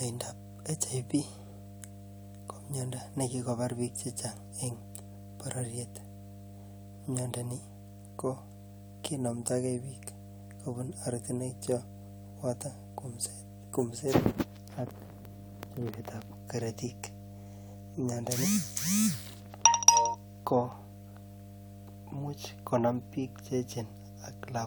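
Mains hum at 50 Hz runs throughout the speech, fairly loud, a steady pitched drone from power-line coupling, unlike broadband rumble, which has no fixed tone.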